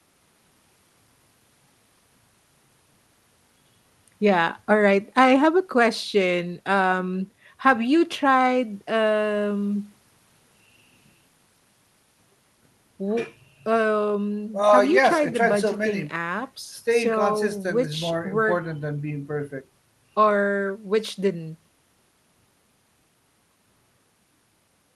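Nothing goes wrong anywhere in the clip; it's just speech carried over an ordinary call link, with the gentle roll-off of the top end around 12 kHz you'd expect from an Opus call at a modest bitrate.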